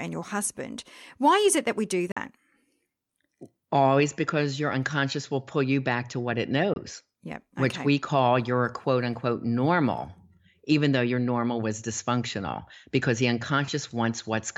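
Bluetooth dropouts at 2.12–2.17 s and 6.74–6.76 s cut the speech to silence for 46 ms and 23 ms, then it resumes as though it had kept playing. Packets likely missed their deadline to the headphones, the gaps fitting two lost packets and one.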